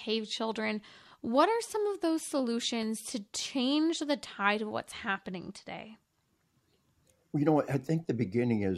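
No technical faults can be heard anywhere in the speech.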